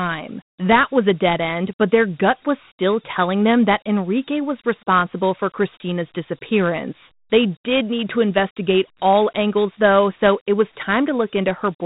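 From start to finish, the speech carries Dialogic VOX ADPCM damage. Nothing is heard above about 3.9 kHz, so the top of the band is gone and the sound is dull and narrow. The codec stores each sample as a 4-bit step from a prediction, not as a full value. That coarse stepping leaves a plainly audible grit riding on the speech. The rate points to 4-bit samples at 8,000 a second, which fits 32 kbps.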